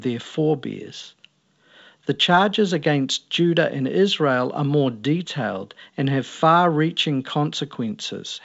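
Nothing stood out on listening to this speech, which comes through G.722 wideband telephone coding at 64 kbit/s with content reaching up to about 7.7 kHz.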